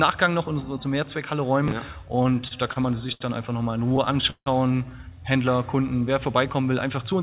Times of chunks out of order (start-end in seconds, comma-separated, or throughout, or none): 1.68-1.72